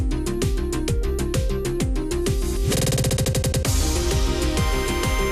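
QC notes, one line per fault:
Throughout: MP2 compression, likely from a low bitrate around 80 kbps. Upper sub-bands drop in and out and the remaining bands are coarsely quantised, giving a dull, gurgling graininess; unlike a simple low-pass, the top end flickers rather than staying cleanly cut.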